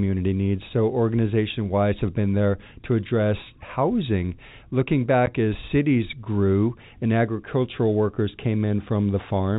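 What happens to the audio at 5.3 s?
A packet was lost at 5.26 s, and the receiver played silence in its place rather than concealing the gap. The speech drops out completely for 10 ms, a hole about the length of a single short packet, just before "as cities grew and". The signal stops and restarts abruptly instead of fading, leaving hard edges. The narrow telephone band from the G.711 coding continues on either side of the dropout.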